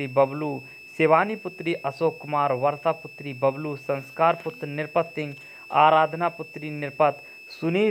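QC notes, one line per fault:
Throughout, switching supply whistle: a thin, steady high tone sits under the audio, wandering between about 2.59 and 2.67 kHz, and roughly 20 dB below the programme level. A switching power supply running in an audible burst mode, or beating against a second supply, puts its switching energy into the audible band. The small pitch drift follows the supply's load shifting during the recording.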